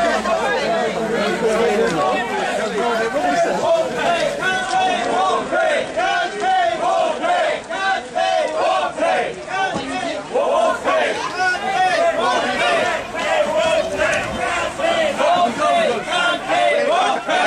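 A hybrid receiver lost its digital stream and blended to the station's FM broadcast, a digital radio blending to analogue, from 4.5 s to 10.6 s. Over a 235 ms cross-fade, the level drops about 1 dB, and faint hiss appears well below the signal.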